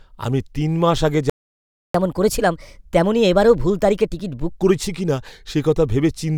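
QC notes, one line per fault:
1.30–1.94 s, playback stall: right after "আমি তিন মাস আগে" the speech cuts to silence for about 0.65 s, then resumes. The cause is likely the player running out of buffered data or its output thread being blocked. The audio simply halts mid-flow and picks up again.
1.94–4.53 s, catch-up at higher speed: from the moment playback resumes until just before "করেছি কিনা", the speech runs at 1.25 times normal speed, and its pitch rises by about four semitones along with the tempo. The player is resampling its backlog to win back the 0.65 s lost in the stall. Because speed and pitch climb together and then both drop back to normal, this is distinct from a standalone pitch shift or a time-stretch that preserves pitch.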